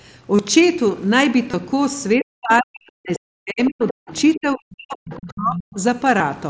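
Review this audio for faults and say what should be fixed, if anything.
Concealed Bluetooth headset packet loss occurs at 0.36 to 0.39 s (30 ms), 1.51 to 1.54 s (about 23 ms) and 6.18 s. At each gap the receiver filled the hole by repeating the best-matching recent stretch of waveform. On a waveform they appear as a brief run of copied periods. On a spectrogram they show as a smeared, overly regular harmonic patch with a small seam where real audio resumes. To prevent it, keep the headset close to the phone and clear of 2.4 GHz interference.

Speech suppressed in double talk runs from 2.16 to 4.11 s and from 4.36 to 5.77 s, with about 1.5 s of each span affected. The talker's level dips and cuts out in pieces, at its deepest by about 40 dB. The likely cause is the echo canceller clamping down while both sides spoke at once. The waveform shows the envelope collapsing to near-silence in chunks. 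On a spectrogram, whole vertical slices go dark and the upper band thins before the lower one. To prevent it, use a headset instead of a loudspeaker, or an echo canceller with full-duplex double-talk handling.

The other side's voice leaking through appears as scraps of a second voice at 3.15 to 3.19 s (about 20 dB below the talker), 3.88 to 3.93 s (about 15 dB below), 4.09 to 4.13 s (about 30 dB below), 5.14 to 5.29 s (about 20 dB below) and 5.55 to 5.63 s (about 10 dB below). These most likely come from loudspeaker echo the canceller left behind, and they fall inside or next to the suppressed spans. On a spectrogram they are weak, choppy harmonic fragments that do not line up with the main talker's pitch. On the waveform they are small bursts. To prevent it, lower the playback volume or stop using an open loudspeaker, and give the echo canceller a clean reference signal.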